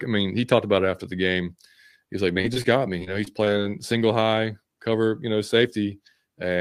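From about 2.33 to 3.48 s there's repeated packet loss giving a robotic sound, just before "single high cover you". Eight short dropouts, the longest about 23 ms, get papered over by stretching the last bit of sound, so the speech turns choppy with pieces missing.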